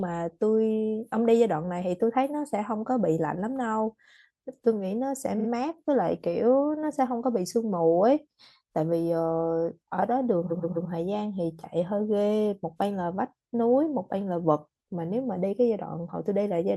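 Repeated frames at 5.38 and 10.50 s: a 43 ms, then a 128 ms, stretch of the speech replays two and three extra times, adding a stutter.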